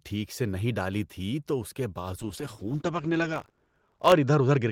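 At 2.19 s, just after "تھی تو اس کے", a call bitrate drop sets in and lasts to the end. The audio bandwidth narrows from 20 kHz to 8 kHz, and the speech turns muffled and coarse, consistent with the encoder falling from roughly 32 kbps to 11 kbps, with the worst stretch lasting about 1.86 s.

From 3.32 s to 4.14 s, buffer tearing adds a steady 50 Hz robotic buzz during the speech. The writer and reader of the ring buffer have slipped, so a small slice of each 20 ms period holds audio from about 40 ms earlier, spliced in with hard joins.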